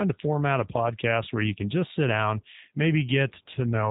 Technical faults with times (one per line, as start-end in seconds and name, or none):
0.00-3.90 G.729 codec